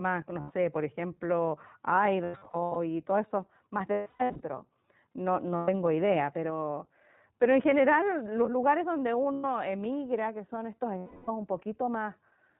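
iLBC codec throughout: nothing above 4 kHz passes, and a plainly rough, synthetic edge fits 20 ms frames at 15.2 kbps. Lost iLBC frames at 0.40 to 0.52, 2.24 to 2.77, 3.92 to 4.41, 5.56 to 5.70, 9.32 to 9.46 and 10.98 to 11.30 s: the decoder repeats the last pitch cycle with noise, giving a held, buzzy vowel. The second and third losses are broken into short scattered runs, and the sound recovers almost at once after each.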